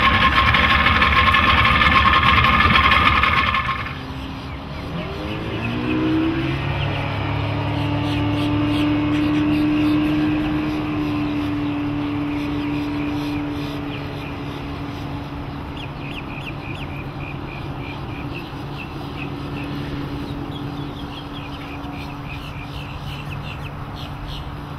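No technical faults can be heard anywhere in the recording, and the signal holds steady throughout.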